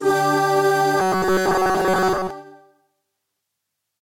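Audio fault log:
1.00–2.30 s, robotic sound from repeated short buffers: a rigid metallic buzz at 188 Hz, likely from a slice of about 5 ms replayed in place of most incoming audio.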